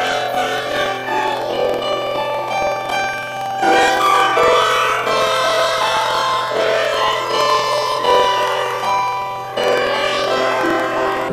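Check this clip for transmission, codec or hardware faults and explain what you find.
One fault is present, lasting the whole clip: planar audio read as interleaved. Each block of about 46.44 ms, which fits a 2048-sample block, stores all left samples and then all right samples. It is read as alternating pairs, so each block plays twice at double speed. The sound is an octave high, with a flutter at 21.5 Hz.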